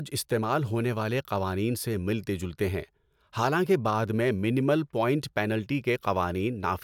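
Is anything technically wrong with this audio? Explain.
No technical faults are audible.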